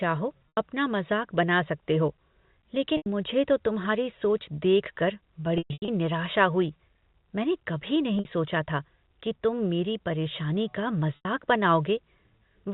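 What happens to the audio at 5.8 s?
Packet loss with pitch repetition affects the sound from 5.58 to 5.88 s. About 240 ms of audio goes missing in several gaps spread over 300 ms, which fits packets of roughly 30 ms each. At each gap the receiver loops the last pitch period, giving a brief held, buzzy tone. In the longest gap, 120 ms, that repetition fades out within about 50 ms and leaves silence until the audio cross-fades back in.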